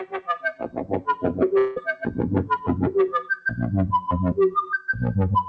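A noise suppressor built for speech stays active on these sounds throughout, treating sustained content and decays as noise. Level swings of roughly 10 dB make the sound pump and thin as held portions sink while onsets pass.

From 0.53 to 1.24 s, the sound is cut by the noise suppressor. Over about half a second of that span, sustained parts drop by as much as about 14 dB, so decays are clipped short and the sound dips noticeably.

At 1.58 s, about 180 ms of audio goes missing, likely a long network dropout. The receiver fills the gap up to 1.78 s with a fading, buzzy continuation of the preceding sound rather than silence. Normal sound resumes afterward without the lost portion.

Between 1.97 and 2.18 s, the noise suppressor cuts the sound again, over roughly 200 ms with a drop of up to about 8 dB. Tails weaken audibly. Through the G.722 call path, nothing above 8 kHz remains.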